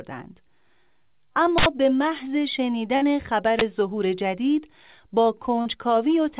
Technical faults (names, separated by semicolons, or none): uninitialised buffer; burst of packet loss; short concealed packet loss